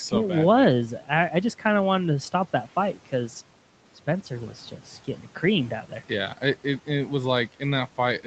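Right after "wanted to stop that", from 2.94 to 3.13 s, the noise suppressor cuts into the speech. It mistakes part of the speech for background and pulls it down by up to about 11 dB for around a tenth of a second, so the sound comes out swallowed and faint.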